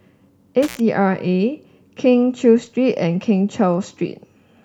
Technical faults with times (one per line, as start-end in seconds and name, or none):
0.63-0.80 intermittent contact